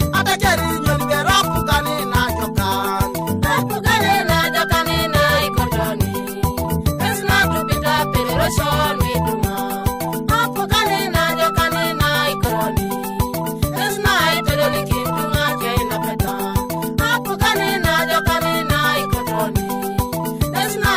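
Damaged data in a compressed stream hits twice, at about 12.48 s and again at 16.27 s. At each point part of the encoded audio is wrong, so the decoder misreads the affected frame, loses its place and has to search for the next valid frame header before it can resume. Each time, the sound breaks into a very short chirp or blip, under 20 ms long, before normal decoding picks up again.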